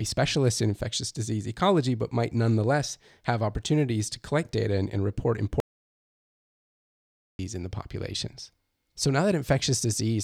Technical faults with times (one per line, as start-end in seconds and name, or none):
5.60-7.39 audio dropout to silence